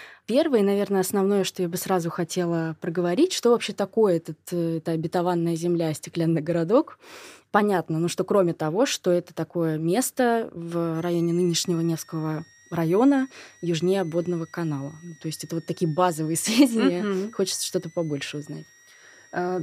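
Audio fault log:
10.95–19.63 s, switching supply whistle after "что это такое место": a high whistle near 2 kHz, drifting between 1.81 and 2.14 kHz, about 30 dB below the speech, from a power supply cycling audibly.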